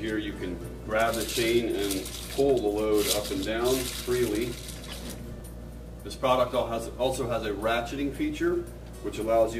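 From 6.20 s to the end at 9.59 s the audio carries sample clock jitter. The converter's clock wanders by something like 7 µs, so each sample lands slightly off its proper instant, and the resulting error tracks how steeply the waveform is changing. It sounds like a gritty hiss riding on loud, bright passages, roughly 30 dB below the signal. On a spectrogram this shows as a noise haze spreading around strong high components. The waveform looks essentially unchanged.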